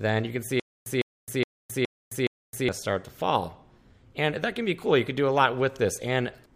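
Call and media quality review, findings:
Stutter with silent gaps, 0.60–2.69 s. The same 154 ms burst repeats 5 times, each followed by 264 ms of silence, on a steady 418 ms cycle. Likely a player or stream stall: each retry replays the last fragment, then the buffer runs empty. The audio in between is lost.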